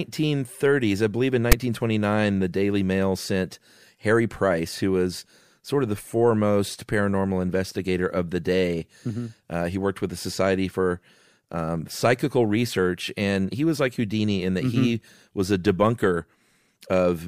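At 1.52 s, a short burst of static cuts into the speech. It lasts only about 10 ms. This is file tags played as audio. A block of text metadata was decoded as if it were sample values. Character bytes make a harsh, loud rasp. That rasp sits offset to one side of zero, so the waveform jumps away from centre. The burst starts and stops with hard edges. There is no fade at either end.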